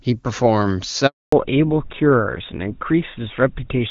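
At 1.06 s the speech just drops out, fading within a few tens of milliseconds and staying silent until 1.32 s, so about 260 ms is gone. That's a handover gap: the call was being moved from one network to another, no speech frames got through during the switch, and whatever was said in that stretch is simply lost rather than smeared or garbled.

When the sound comes back at 1.32 s, it has changed character, and it stays that way to the end. That's a fallback to narrowband. Before the gap, the AMR wideband (HD Voice) codec carries the speech cleanly, with the bright, airy top end you'd expect from a rate around 23.85 kbit/s. After it, nothing above 4 kHz survives, so the speech sounds duller, boxier and a bit rougher, which fits a switch to an older codec like GSM full rate.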